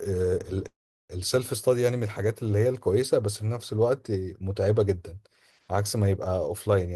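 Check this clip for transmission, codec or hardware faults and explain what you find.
One transmission fault is present. From 0.67 to 1.12 s there is a call audio freeze: packets were likely delayed, draining the jitter buffer, so the last sound trails off into about 380 ms of silence before speech resumes intact, now running about 420 ms late.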